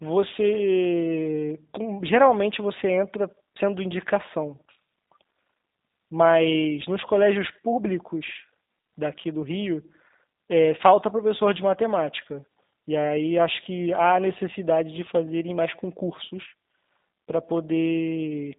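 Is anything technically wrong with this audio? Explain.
Yes, there's one problem, and it runs through the whole clip: G.729 codec damage. The speech has been squeezed through this low-rate VoIP codec, consistent with its 8 kbit/s mode. It rebuilds each 10 ms frame from a vocal tract filter, a pitch predictor and a handful of pulses, so the voice comes out plainly rough and a bit synthetic, and everything above about 3.8 kHz is simply gone.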